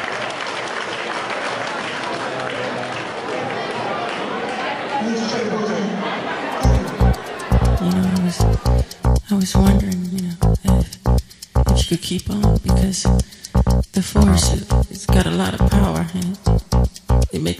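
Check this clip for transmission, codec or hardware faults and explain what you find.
No transmission, codec or hardware faults.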